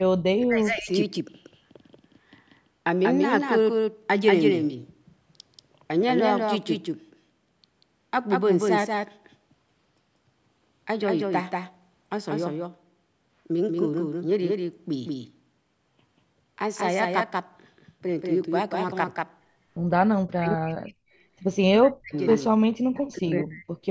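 A doubled audio track runs through the whole clip: a full-band copy of the speech trails the original by around 200 ms at about 5 dB quieter, likely from a second, slower capture path. It sounds like a dry slapback. On a spectrogram, each syllable has a fainter identical twin shifted right.

Speech suppressed in double talk occurs at 0.0–0.1 s, 0.37–0.9 s, 20.2–20.94 s, 21.64–22.15 s, 22.48–22.56 s and 22.94–23.69 s. The voice drops by roughly 30 to 40 dB or breaks into pieces, likely an echo canceller ducking everything. The waveform shows near-flat gaps.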